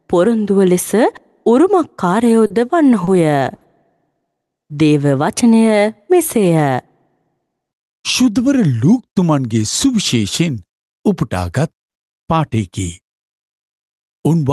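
Three short stalls from a late packet fall at 2.46 to 2.52 s, 3.04 to 3.09 s and 3.55 to 3.63 s. Each time the jitter buffer ran dry, so the receiver held the last sound for 40, 30 and then 60 ms before resuming where it left off. Nothing is lost, but each sound lingers with a faint buzz or dip. On a spectrogram this looks like frozen, horizontally stretched bands, all below a ceiling near 12 kHz from the call codec. In the waveform it looks like a repeated cycle.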